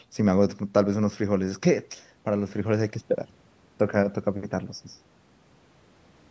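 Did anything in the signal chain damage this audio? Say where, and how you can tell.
No, nothing in the chain damaged this speech; it went through ordinary call microphone processing, which rolls off the lowest bass and leaves nothing above 8 kHz, and that's just how a call path behaves.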